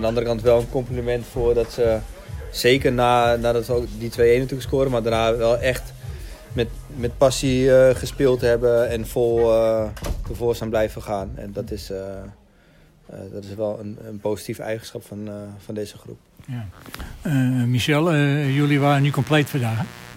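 From 18.41 s to the end at 20.17 s, a mains buzz enters: sharp switching spikes from a dimmer, rectifier or unshielded line, arriving twice per 60 Hz cycle, so 120 times a second. It sounds like a steady, raspy buzz sitting roughly 20 dB under the sound. A spectrogram shows a dense ladder of horizontal lines at multiples of 60 Hz climbing to several kHz, and the waveform carries a regular train of narrow spikes.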